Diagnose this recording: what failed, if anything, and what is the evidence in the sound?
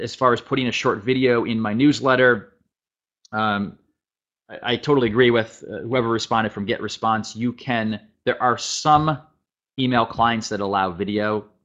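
Nothing in the recording points to a failure at any stage of the chain. There is no audible evidence of a fault to diagnose.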